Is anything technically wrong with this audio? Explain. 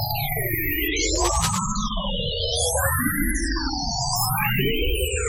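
Yes. There is a burst of cable scratch noise from 1.15 to 1.59 s. For a little under half a second, dense, irregular crackling and rustling sits over the sound, roughly 10 dB below it. The likely cause is a worn cable, connector or control being moved. Its contact resistance changes rapidly and unevenly as it shifts, which injects bursts of broadband noise into the signal path and produces a scratchy texture rather than a single click.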